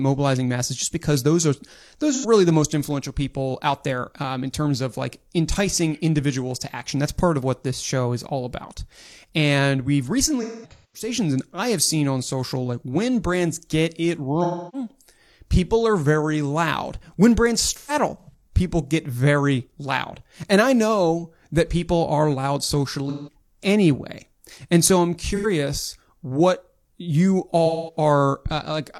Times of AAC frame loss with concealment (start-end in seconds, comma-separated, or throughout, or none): 2.11-2.25, 10.42-11.08, 14.43-14.91, 17.69-18.45, 23.09-23.34, 25.35-25.46, 27.66-27.97